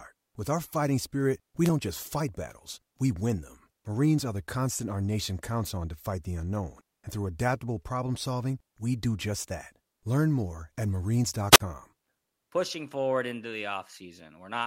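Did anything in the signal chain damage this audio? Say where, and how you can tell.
Yes. Twice the speech thins into a brief burst of static and falls into a near-silent hole: after "our fighting spirit" at 1.64 to 1.70 s (3 ms mute, before "don't just fight battles"), and at 11.51 to 11.60 s (45 ms mute). This is wireless microphone squelch dropout: the analogue FM radio link faded, and the receiver's squelch muted its output.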